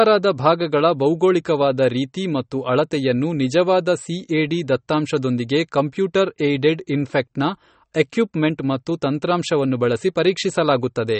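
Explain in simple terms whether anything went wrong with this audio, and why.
Yes. Throughout the speech, everything above about 8.4 kHz is missing and compression damage is plainly audible, likely MP3 compression rather than simple treble filtering.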